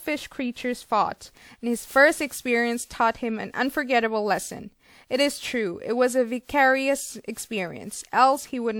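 Generation loss runs through the whole speech clip, from start to finish. The sound is swirly and hollow, with consonant onsets smeared, more damaged than a single lossy pass would leave it. It likely comes from being encoded about three times over with a WMA-type codec at a rate around 96 kbit/s. Each pass quantised on a shifted frame grid, compounding noise. Nothing is present above 20.1 kHz.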